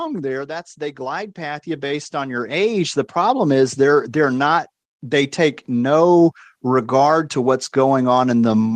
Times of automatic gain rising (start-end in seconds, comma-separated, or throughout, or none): 0.47-3.64